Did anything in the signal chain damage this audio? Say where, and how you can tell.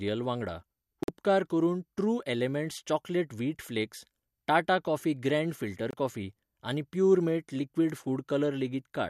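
Yes, a digital broadcast dropout at the reception stage. The speech cuts to silence from 1.03 to 1.09 s, ending just before "करून ट्रू", and again from 5.91 to 5.94 s, after "टाटा कॉफी ग्रँड फिल्टर". The receiver muted on bad frames, and the gaps fit two frames and then one being lost.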